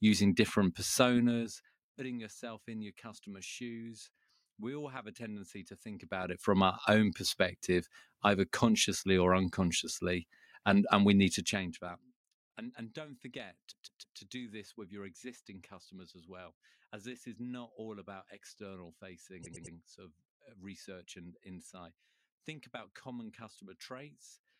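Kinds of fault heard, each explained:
Repeated frames: bits of the compressed stream got replayed, so the speech stutters in place. From 13.70 to 14.17 s a 157 ms slice plays three extra times, and from 19.42 to 19.74 s a 105 ms slice does likewise, lengthening the audio.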